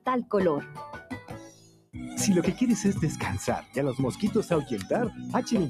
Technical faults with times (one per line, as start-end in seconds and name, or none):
0.00-5.69 noise suppressor applied to music or sounds
0.64-1.96 sound cut by the noise suppressor